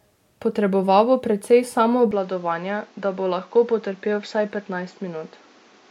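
Input switched to a poorer device at 2.11 s, with no gap: the speech turns duller and somewhat quieter, loses everything above 7.6 kHz, and gains a faint new noise floor, likely because recording moved to a narrower-band microphone for the rest of the clip.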